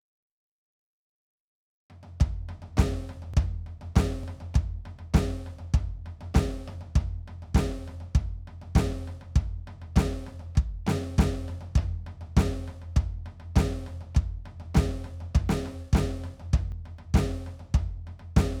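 At 3.34 s, 4.24 s and 16.72 s the music jumps forward. There is no gap of silence. Each time, a few milliseconds of audio simply vanish and the two edges meet abruptly. This is likely a dropped buffer (overrun). The software did not collect its samples before the hardware overwrote them. That short block was lost, so the waveform splices straight across. The first skip is slightly longer than the other two.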